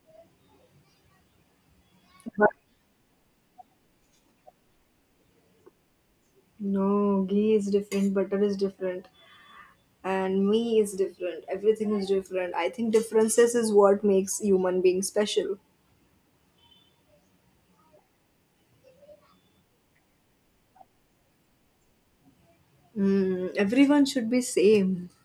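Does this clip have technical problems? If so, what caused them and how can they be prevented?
No, nothing in this speech recording stood out as a technical problem on listening, so there is no cause to trace and nothing here that needs preventing.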